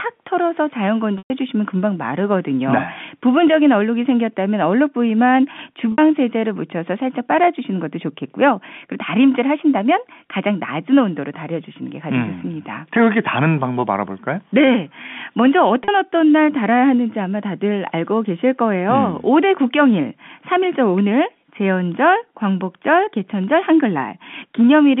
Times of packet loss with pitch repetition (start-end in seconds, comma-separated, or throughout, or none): 1.18-1.30, 5.92-5.98, 15.84-15.88